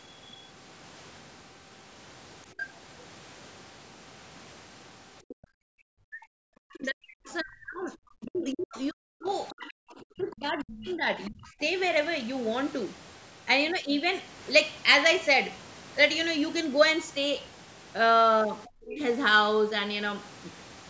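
At 2.6 s, a brief scrap of a second voice comes through, fairly loud, about 10 dB below the talker. This is the other side's voice leaking through. It is likely echo from a loudspeaker that the echo canceller did not fully remove. It returns, quieter, from 5.28 to 5.44 s, from 8.39 to 9.51 s, and from 10.33 to 11.48 s, there about 20 to 25 dB down.

From 5.35 to 5.64 s, the room sound drops out for about a third of a second. The dip reaches about 37 dB. This is background gated by the echo canceller. It clamped the microphone while the loudspeaker played, then released.

From 5.92 to 11.57 s, the talker's speech is suppressed in double talk. Over roughly four seconds it dips, falling up to about 40 dB. The likely cause is both sides talking at once, so the canceller turned everything down. A shorter dip, about 25 dB, hits from 18.82 to 19.01 s.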